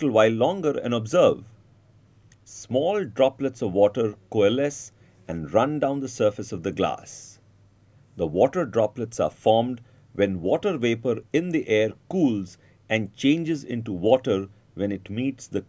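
Nothing stood out as a technical fault on listening to this audio.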